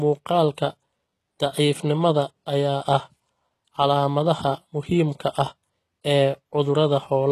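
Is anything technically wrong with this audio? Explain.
Yes. Throughout the speech there is plainly audible damage that is likely from HE-AAC compression at a low rate, fitting something near 16 kbps. The codec encodes only the lower spectrum and synthesizes the treble by copying lower bands upward under a coarse envelope, so s sounds turn gritty, metallic or lispy, and the content stops dead at 12.4 kHz. Unlike a simple low-pass, the top still sounds bright, but its harmonics don't line up with those below.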